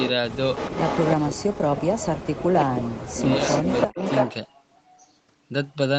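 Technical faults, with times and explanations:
0.00–0.13, 0.55–1.15, 2.60–2.81 and 3.21–4.34 s, echo leak: a delayed copy of the speech trails the live talker by about 0.33 s. It starts faint, around 10 dB down, gets louder at about 5 dB down, and in the last stretch it's roughly as loud as the speech itself. That pattern points to the likely cause: the far end is on a loudspeaker and its echo canceller isn't fully removing what its mic picks up, so that audio gets sent back to us.
1.17–1.84, 2.51–3.21 and 3.86–3.98 s, speech suppressed in double talk: the talker drops out in chunks, by as much as about 40 dB at the deepest. That adds up to roughly 0.7 s in the first stretch, half a second in the second and about a tenth of a second in the last. The likely cause is the canceller hearing both sides at once, failing to separate them, and turning everything down.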